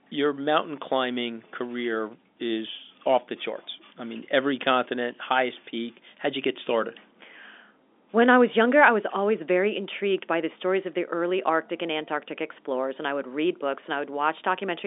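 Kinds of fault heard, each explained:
No faults heard.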